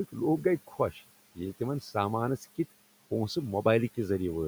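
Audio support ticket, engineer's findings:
Speech cut by the noise suppressor, 0.67 to 1.02 s. Soft speech swallowed, dips about 10 dB, roughly 150 ms affected. Suppressor misread low-level speech as noise and turned it down with the room noise, itself about 20 dB below speech.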